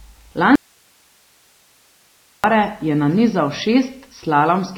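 From the start the speech has a watery, swirly quality with nothing above 5.9 kHz, which points to likely MP3 compression at a starved bitrate, something near 24 kbps. At 0.55 s the speech cuts out abruptly to faint hiss roughly 40 dB down, returning at 2.44 s; that's an audio dropout to a faint residue, likely a lost signal with the path still live.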